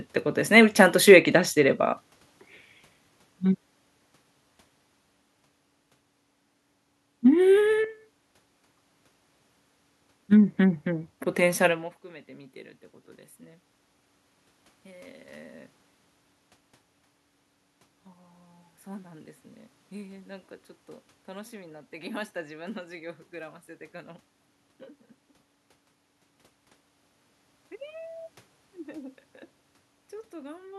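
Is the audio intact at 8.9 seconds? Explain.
Yes, the audio is intact at 8.9 seconds, with only the background noise of the room itself present beneath the speech.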